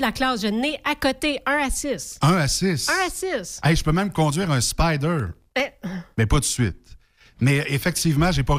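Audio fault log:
5.20–5.72 s, processor overload crackle: for about half a second the speech picks up a gritty, tearing crackle that stops as soon as the load eases. The processor was falling behind on very short buffers, well under a millisecond each, and missed something like thirty deadlines over that stretch. Each miss dropped in a tiny slice of silence with hard edges, and that quick string of clicks blurs together into the crackle you hear over the speech.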